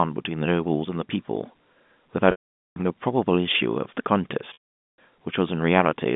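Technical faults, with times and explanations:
2.31–2.76 s and 4.53–4.97 s, packet loss with pitch repetition: each 450 ms gap is bridged by a repeated pitch period that buzzes, fades to silence, then cross-fades back.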